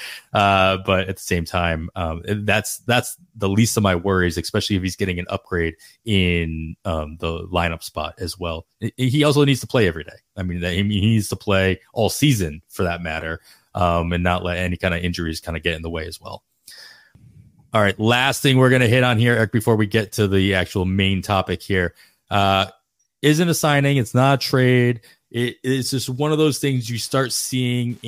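At 26.12 s, after "trade it it's just", Wi-Fi interference starts and runs to the end. A nearby Wi-Fi radio's beacon is being picked up and rectified by the audio circuit. It ticks steadily every 102.4 ms. The ticking sits around 40 dB below the speech.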